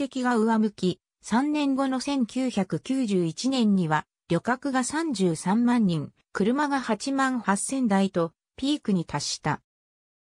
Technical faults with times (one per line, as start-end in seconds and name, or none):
none